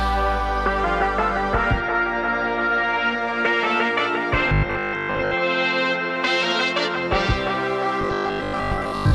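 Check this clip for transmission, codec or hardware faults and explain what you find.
Robotic sound from repeated short buffers, from 4.49 to 5.35 s and again from 8.01 to 9.13 s, is the fault here. A fixed 50 Hz metallic buzz replaces most of the material. It likely comes from audio arriving too slowly, so roughly 20 ms chunks are looped in place of the skipped sound.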